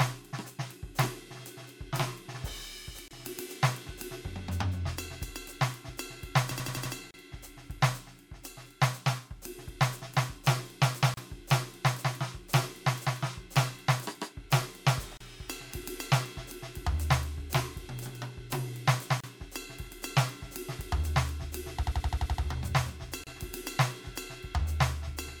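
At 3.08 s the music drops out for 28 ms, the first gap at a join of encoded pieces. The same short silence, now 32 ms, recurs every 4.0 s, at 7.11, 11.14, 15.17, 19.20 and 23.24 s. The pieces were encoded separately and butted together untrimmed, so encoder start delay and last-frame padding leave a clean hole with smeared edges, after which the music resumes where it stopped.

Between 6.51 and 6.94 s a system hang loop repeats one 85 ms slice five times, a stutter at 11.7 Hz that fits a 4096-sample ring buffer replayed while the machine froze. It returns from 21.83 to 22.43 s with seven repeats, and the music then continues with essentially nothing skipped.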